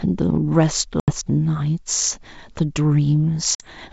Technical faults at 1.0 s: packet loss on an ADPCM call

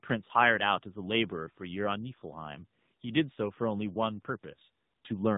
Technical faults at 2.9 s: tandem speech coding

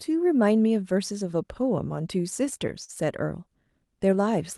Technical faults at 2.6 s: repeated stalls (stutter)

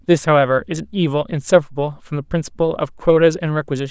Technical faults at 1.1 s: none

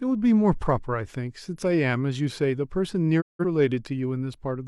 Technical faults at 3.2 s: digital broadcast dropout

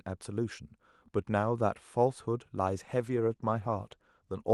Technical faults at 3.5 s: call bitrate drop

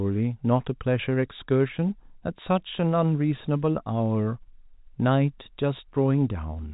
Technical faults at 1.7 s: none

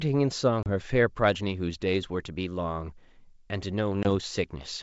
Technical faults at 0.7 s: packet loss on an ADPCM call

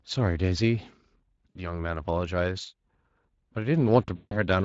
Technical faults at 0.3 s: Speex codec

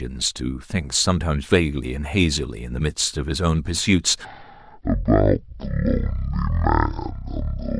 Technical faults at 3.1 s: none

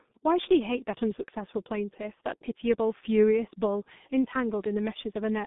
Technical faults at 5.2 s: G.723.1 codec

